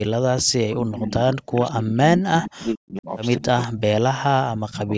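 A speech recording, band-limited to 8 kHz by call microphone processing, with the voice dropping by as much as about 40 dB at 0.03 to 0.09 s, 0.48 to 3.09 s, 3.41 to 3.81 s and 4.32 to 4.92 s. That is speech suppressed in double talk, likely from an echo canceller muting the talker while the far side spoke. A faint repeat trails the voice by 198 ms at 1.5 to 1.74 s (about 20 dB down) and 3.39 to 3.66 s (about 15 dB down), an echo leak, likely residual loudspeaker pickup slipping past the canceller. A constant DC offset runs throughout, silently shifting the waveform off zero and wasting headroom.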